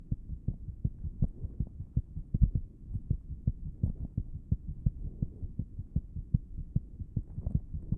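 Sounds run twice as fast and a full octave high throughout, a wrong sample rate fault that fits 16 kHz audio played at 32 kHz. Speed and pitch shift together, which rules out a pitch-preserving time stretch.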